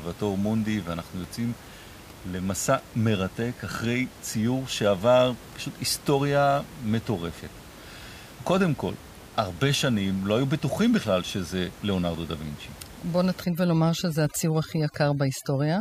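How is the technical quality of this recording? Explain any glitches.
The recording has one audible fault, overdone noise removal, which affects the final stretch of the speech. Before it, the room noise sits about 20 dB below the speech.

From 13.44 s to the end at 15.81 s, the noise reduction is set too aggressively. Frequency bands close to its noise estimate are pulled down or switched off entirely, and the quieter parts of the speech go with them. The background drops and breaks up into twinkling specks.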